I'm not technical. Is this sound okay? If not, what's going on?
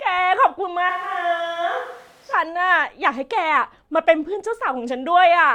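No. From 0.90 to 2.33 seconds there is a switch to a distant microphone. The speech suddenly turns roomy and hollow, with less bass, somewhat quieter and with faint room noise, then snaps back. Most likely the close microphone dropped out and a farther one took over.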